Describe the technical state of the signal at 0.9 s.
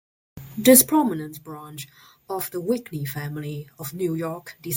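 At 0.9 s the level is falling with zipper noise, from 0.75 to 1.16 s, just before "branch of the". The gain drops in 1 dB steps, around forty per second, with no smoothing. Each step clicks, giving a ticking zip over the fade of roughly 15 dB.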